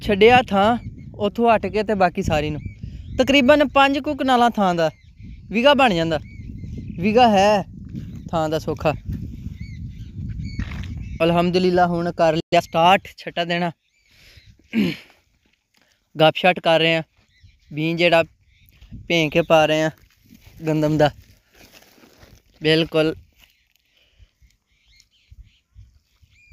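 At 12.40 s the player most likely ran out of buffered data or had its output thread blocked, so a playback stall cut the sound off in mid-flow. The output stays silent for about 120 ms until 12.53 s, a gap long enough to hear as a clear dropout.

Right after the stall, from 12.53 to 12.65 s, the player works off its backlog with time-compressed catch-up, slicing out short pieces and cross-fading the joins. That stretch runs at twice normal speed with the pitch unchanged, so the sound is briefly hurried.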